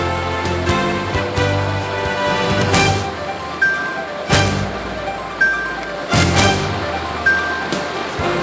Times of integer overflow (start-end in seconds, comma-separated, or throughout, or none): 0.69, 2.74-2.86, 4.33-4.48, 6.14-6.47